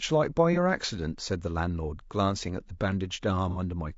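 Throughout the speech, short-frame low-delay AAC compression, likely AAC-ELD at a rate consistent with about 32 kbps, leaves too few bits to resolve pitch harmonics. Voices sound plainly rough and grainy, with noise filling between harmonics and a thin, synthetic top band.

At 0.53 to 0.58 s and again at 3.50 to 3.58 s, AAC frame loss with concealment occurs. Roughly 30 ms, then 60 ms, of audio went missing, consistent with one and then two lost frames. The decoder rebuilt each gap from the preceding spectrum, producing brief smeared, noisy or phasey patches.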